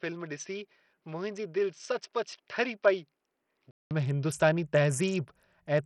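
Input switched to a poorer device, from 0.0 to 3.91 s: the speech likely comes through a lesser microphone, with nothing above 6.2 kHz, a few decibels quieter and carrying a faint extra noise floor. It sounds dull and boxy, then clears after a 200 ms silence at the switch.

Bluetooth SBC compression runs throughout, likely from a heavily squeezed SBC link, which fits a low bitrate around 64 kbps. Starved upper sub-bands lose their bits, so the treble flickers and thins, while coarse quantisation leaves a gritty, aliased haze riding on the speech.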